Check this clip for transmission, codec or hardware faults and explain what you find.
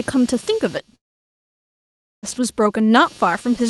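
Two faults can be heard in this speech clip, carried over a call path whose high end stops near 12 kHz.

Computer activity noise runs throughout. Load changes in the processor or graphics card shift the shared ground, adding a buzzing pulse near 200 Hz, roughly 25 dB below the speech.

A long network dropout runs from 0.95 to 2.26 s. Audio likely stopped arriving, so the last sound smears into a brief fading buzz, then silence until speech resumes with about 1.3 s lost.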